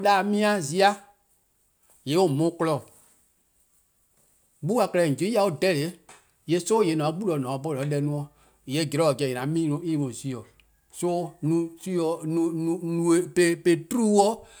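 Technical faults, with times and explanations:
No technical faults detected.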